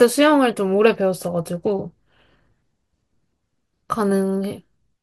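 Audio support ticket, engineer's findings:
No faults found on listening; the speech shows no audible defects anywhere in the recording.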